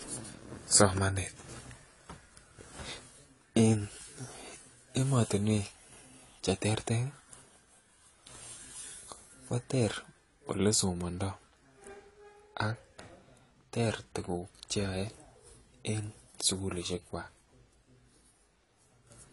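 From start to finish, the speech carries plainly audible codec damage. Nothing sounds above 11.5 kHz, so the top end is dull and sibilants lose their air. The texture is smeared rather than clean. The likely cause is AAC compression, with the AAC-LC encoder working at a low bitrate. That fits a rate around 32 kbps. At that rate the encoder cuts the high band and coarsely quantises what remains. The damage stays constant across the whole clip.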